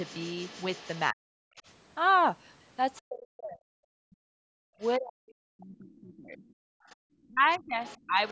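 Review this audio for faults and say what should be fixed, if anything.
Other side's voice leaking through: a second voice sits faintly under the speech from 0.00 to 1.72 s and from 5.94 s to the end, roughly 25 dB below it, with short scraps at 2.95–3.01 s and 4.81–4.88 s, roughly 30 dB down. The likely cause is loudspeaker playback reaching the microphone and not fully removed by the echo canceller. Fix: improve echo path modelling or use a headset.

Speech suppressed in double talk: the talker's level drops sharply, by around 40 dB at worst, at 1.12–1.36 s and again across much of the stretch from 3.07 s to the end, about three seconds of affected audio in total. The canceller likely treated simultaneous talk as echo and attenuated everything. Fix: tune double-talk detection so near-end speech is preserved.

Background gated by the echo canceller: room sound drops out at 4.55–4.68 s by 40 dB and at 6.84–6.98 s by 28 dB, each lasting only a short moment before returning. 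The canceller's suppressor clamped the microphone hard while the loudspeaker played. Fix: use softer suppression with comfort noise filling the gaps.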